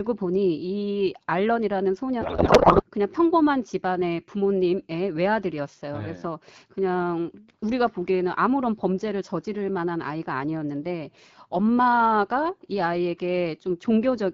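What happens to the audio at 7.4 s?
Nothing goes wrong at 7.4 s: the speech there passes through the AMR wideband (HD Voice) codec at 12.65 kbit/s with no dropout, glitch or other fault at that moment.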